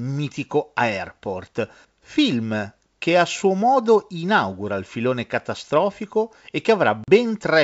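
At 7.04 s, near the end of the speech, packet loss on an ADPCM call cuts a hard-edged gap of about 40 ms, consistent with a couple of dropped packets, lasting until 7.09 s. The waveform falls flat to silence with abrupt edges, and the spectrogram shows a clean vertical blank band across all frequencies. When sound resumes, the decoder's predictor and step size no longer match the sender's, so the restart comes in slightly distorted before settling. Around this gap, the G.722 coding at 64 kbit/s keeps its wideband reach up to 7 kHz.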